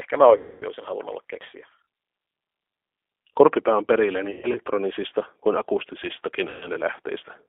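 From the first moment to the end, the speech carries G.729 codec damage. The line is limited to roughly 300 Hz to 3.5 kHz, and the 8 kbit/s coding rebuilds each 10 ms frame from a filter, a pitch predictor and a few pulses, so the voice sounds rough and faintly synthetic. On a spectrogram there is nothing above 3.5 kHz, and the harmonics look smeared rather than crisp.

Three stretches of VoIP packet loss concealed by the speech codec interrupt it. From 0.37 to 0.64 s, just before "olisin halunnut olla keksiä", about 240 ms of audio is missing. That points to eight consecutive 30 ms packets. The decoder extrapolates from its last pitch and filter with falling gain, stretching the sound into a buzzy tone or coloured noise that fades. From 4.31 to 4.60 s, right after "on perillä", 150 ms is lost in scattered gaps across 240 ms, with the longest run 120 ms. From 6.49 to 6.67 s, a 120 ms gap is concealed the same way. 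After each gap the voice recovers gradually because each frame builds on the one before.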